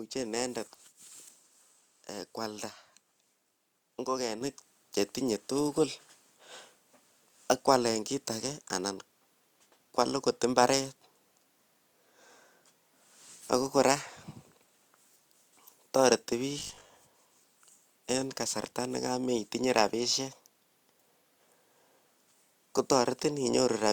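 At 4.41 s the microphone volume stepped up. The call software judged the input too quiet and raised the device's input gain in a single jump of about 7 dB, so the speech and the background noise both become abruptly louder at the same instant.

From 16.59 to 16.91 s comes robotic sound from repeated short buffers. New audio likely arrived too seldom, so the software kept replaying the last 20 ms in place of roughly two-fifths of the real signal. Those repeats impose a fixed 50 Hz buzz, turning the speech into a rigid, metallic drone that only loosely tracks its shape.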